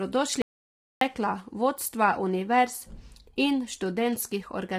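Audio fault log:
Throughout: low-delay AAC compression. The speech was likely squeezed through AAC-ELD, whose short frames resolve pitch harmonics poorly; the heavy damage points to a low bitrate near 24 kbps. The voice sounds rough and grainy, with noise filling the gaps between harmonics and a dulled, synthetic-sounding top band.
0.42 to 1.01 s: audio dropout to silence. The input signal was likely lost for about 0.6 s, through a disconnected device, failed link or stray mute, while the recorder kept writing silence. The speech cuts out to total silence, without even room tone, and whatever was spoken in that gap is gone.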